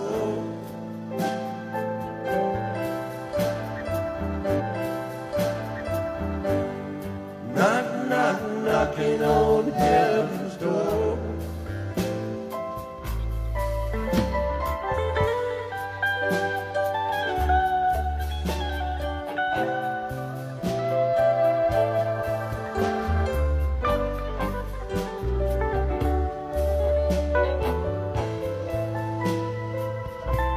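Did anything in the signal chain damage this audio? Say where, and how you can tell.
Yes. At the streaming stage, the player fetched or queued the same segment twice, a stream segment repeated. At 4.55 s a small blip marks the jump back, and the preceding 2.0 s of audio plays again until 6.55 s, stretching the programme by that amount.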